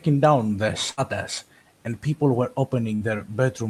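Speech with two brief buzzy or hissy smears at 0.91 s and 2.95 s, each about 60 ms of sound lost to a burst of packet loss, masked by concealment.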